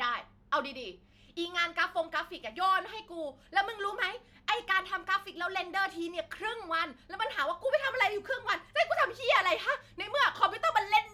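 Listening to the speech recording, nothing stood out as a technical problem at any point.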